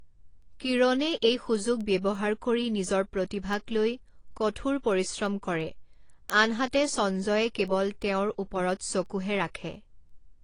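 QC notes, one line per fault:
throughout, AAC compression: The speech sounds dull and smeared, with nothing above about 10.1 kHz and plainly audible warbling and fizzy swirl on sibilants and held vowels. The likely cause is low-bitrate AAC-LC coding, consistent with something near 32 kbps. The encoder drops the top of the spectrum and quantises the remaining bands coarsely against a hearing model, so parts of the signal are thinned out or replaced, which gives the swirly texture.
0.42 to 10.1 s, word clock ticks: Sharp ticks of uneven strength recur steadily about every 0.3 s, roughly thirty of them across the clip. A digital link is being read by a device on its own clock, unlocked to the sender's and off by roughly 70 ppm. Each time the two clocks drift a sample apart, one sample is dropped or repeated. That tiny discontinuity is the tick, and the constant clock mismatch is what makes it repeat at a steady rate.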